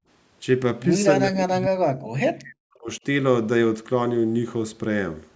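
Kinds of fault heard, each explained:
background gated by the echo canceller: At the very start of the clip the echo canceller decided the loudspeaker was active and clamped the microphone path down hard, treating everything it picked up as echo to be removed. The effect is a brief hole in the room sound from 0 to 0.07 s, where the background falls by about 32 dB for roughly 70 ms before the canceller releases and the ambience returns.
speech suppressed in double talk: Both ends were most likely talking at once here, and the echo canceller, unable to tell the local talker apart from the far-end echo, pulled the whole microphone signal down. Between 1.26 and 3.0 s the voice dips and breaks up in pieces, with the deepest cuts around 40 dB and about a second and a half of speech affected in total, so parts of the talker simply vanish.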